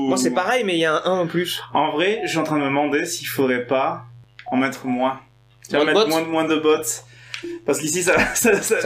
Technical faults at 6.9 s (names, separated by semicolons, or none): mains buzz